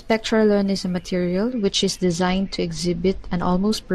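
A short speech clip in which, from 1.51 s to the end, the treble suddenly dulls and a gritty, grainy noise rides on the voice. This is a Bluetooth SBC bit pool drop: the sending device cut the bit budget to keep a congested link alive, so the highest sub-bands got almost nothing and the remaining ones were coarsely quantised. The sound fits a bit pool falling from 28 to 11, near 90 kbps, with no recovery before the clip ends.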